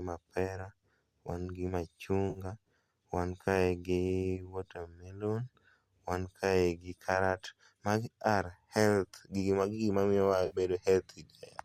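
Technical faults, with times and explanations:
2.30–2.39 s and 10.46–10.56 s, AAC frame loss with concealment: two brief gaps, about 50 ms and then 60 ms, where the decoder rebuilt missing audio from the last good spectrum of what is likely a low-delay AAC stream. Each gap fits five or six lost 10 ms frames. Each patch sounds smeared and noisy or phasey rather than silent. On a spectrogram the harmonics blur into a short, uniform, textureless block.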